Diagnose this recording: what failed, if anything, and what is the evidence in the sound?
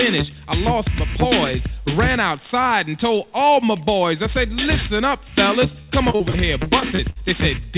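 The network stage failed: repeated packet loss (robotic sound) from 5.82 to 7.18 s. Eight short holes, the longest 59 ms, were patched by stretching the preceding sound, so about 300 ms, roughly 22% of that stretch, is concealment, heard as choppy stutter. On a spectrogram, already empty above 4 kHz as fits a G.711 call path, the stretch shows smeared, repeated harmonic slices and abrupt seams, while the waveform shows copied periods and discontinuities.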